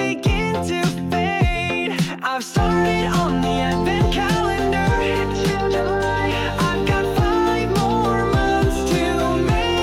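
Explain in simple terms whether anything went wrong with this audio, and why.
Nothing went wrong with this audio, because there's no fault to be heard anywhere in it.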